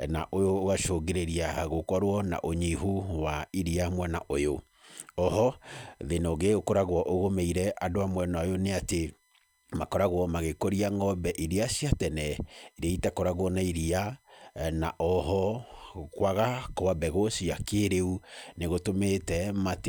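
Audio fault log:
throughout, USB whine: current drawn by the USB bus in 1 ms frames is leaking into the audio path through shared power or ground, so every frame leaves a small pulse in the signal. Those pulses add up to a steady, fixed-pitch whine on a 1 kHz fundamental, with its strongest component at the 2 kHz harmonic. The whine sits faint under the speech, roughly 45 dB down, and is easiest to hear in the pauses.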